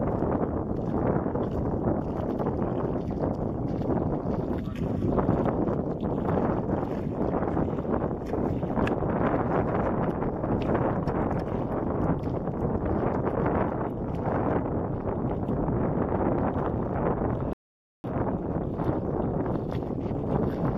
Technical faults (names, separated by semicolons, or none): rebuffering stall